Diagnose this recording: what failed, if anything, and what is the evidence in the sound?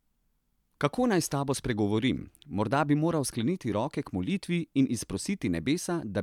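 Nothing failed at any stage of this speech recording: no dropouts, discontinuities, level faults or timing errors are audible anywhere in it.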